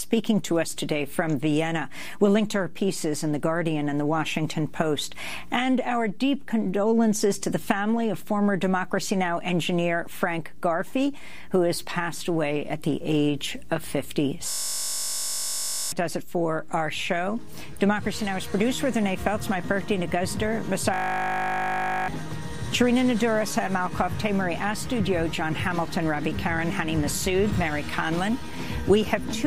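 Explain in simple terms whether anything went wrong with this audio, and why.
Two stretches go wrong, from 14.5 to 15.92 s and from 20.94 to 22.08 s, where the sound turns into a flat, steady buzz. That's a system hang loop: the computer stalled, and the sound hardware kept replaying the same tiny 20 ms slice over and over, 50 times a second. Each hang also swallows real audio, about a second and a half the first time and about a second the second time.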